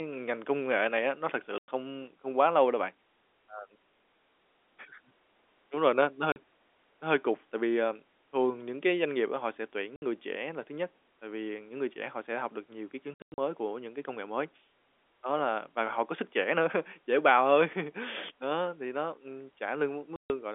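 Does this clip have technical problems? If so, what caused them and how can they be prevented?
Yes. Packet loss filled with silence cuts this speech at 1.58, 6.32, 9.96, 13.14 to 13.38 and 20.16 s. Gaps of 40 to 140 ms fit 20 ms packets. Their edges are hard. Jitter buffering, forward error correction and loss concealment would prevent these holes.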